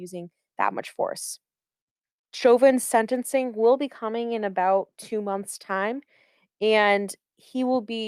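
No technical faults can be heard in this speech recording. Nothing in the audio stands out as an event to place on a timeline.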